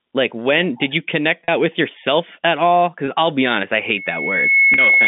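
A telephone-band speech recording, limited to roughly 150 Hz to 3.6 kHz by its G.711 coding, suffers from packet loss with pitch repetition and loudspeaker feedback squeal. Gaps of 40 ms at 1.45–1.48 s and 4.74–4.78 s, and of 20 ms at 3.06–3.08 s, sound like the voice briefly holding a buzzy, frozen tone. The lengths fit two, one and two lost 20 ms packets. The receiver filled each hole by looping the last pitch period. On a spectrogram these appear as short stretches of perfectly flat, evenly spaced harmonics. On the waveform they show as a run of identical repeated cycles that taper slightly into the resumed speech. From 3.84 s to the end, a feedback squeal at 2.2 kHz swells over a little under a second until it sits a few dB above the speech. The microphone is picking up the loudspeaker it feeds, and the loop gain exceeds one at that frequency. A spectrogram shows a single bright horizontal line that thickens as it grows. 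The waveform's envelope rises steadily under the speech.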